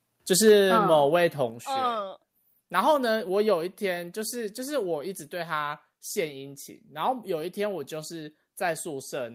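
From 0.47 to 0.75 s the speech has a harsh, crackling edge. This is microphone overload. The peaks run about 3 dB past the converter's limit and lose their tops on a small share of samples, likely because the input volume was set too high.

At 0.49 s, inside that distorted stretch, the microphone volume steps down. Voice and background drop suddenly by about 3 dB. A second step at 1.5 s cuts about 5 dB more. Both likely come from the call software lowering the input gain after the clipping.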